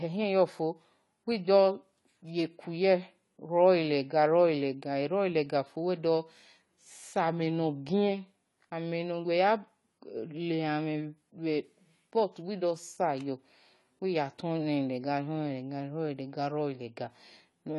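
From start to finish the speech carries AAC compression damage, likely from AAC-LC coding at a rate around 32 kbps. Nothing sounds above 11.5 kHz, and sibilants fizz and warble. Unlike a plain low-pass filter, the remaining band itself sounds smeared and dull.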